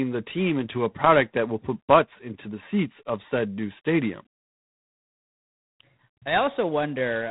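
From start to finish the speech has G.726 ADPCM damage, and it's plainly audible. The coder sends only a few bits per sample of prediction error. That fits the 24 kbit/s mode and leaves a rasping hiss riding on the speech's level. Nothing gets through above about 3.9 kHz.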